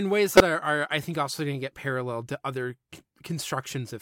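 Speech with a corrupt frame decoded from 0.34 to 0.41 s, just before "are are I think": a loud burst of energy at the wrong frequencies peaking around -5 dBFS, spanning about two damaged frames, not a concealment gap.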